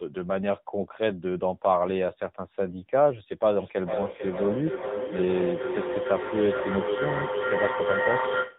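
Speech runs through the whole clip with AMR narrowband mobile codec damage. Nothing above 4 kHz survives, so a spectrogram shows a hard flat ceiling there. The voice has the buzzy, synthetic texture of a low-rate vocal-tract model rebuilt from a few pulses per subframe, consistent with a bitrate around 8 kbps. On the spectrogram the harmonics look smeared and the formants coarse. From 3.59 s to the end there is feedback echo between two devices. A second device in the room replays the call, its sound re-enters the first microphone, and neither echo canceller removes the other's output. Each phrase comes back about every half second, thinner and more ringing, and peaks at about 3 dB below the direct speech. The waveform shows overlapping copies stacked at that spacing, and the spectrogram shows repeated echoes of each syllable trailing across the second half.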